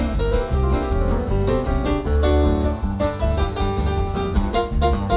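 Nothing in the audio stood out as a technical problem on listening.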